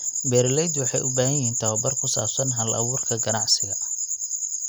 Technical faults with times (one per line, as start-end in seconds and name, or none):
none